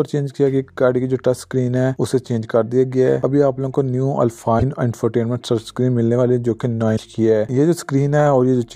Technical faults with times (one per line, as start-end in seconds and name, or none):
4.59-4.63 broken MP3 bit reservoir
6.96-6.99 broken MP3 bit reservoir